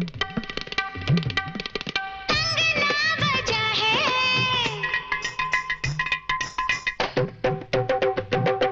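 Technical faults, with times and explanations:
No technical faults can be heard anywhere in the clip.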